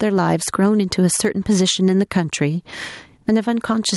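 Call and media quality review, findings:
Gain pumping, throughout the speech. Loud and soft parts squashed closer in level, swing around 15 dB. Likely cause: input gain set far too high, with a fast limiter/compressor clamping every peak. Waveform: flattened peak envelope.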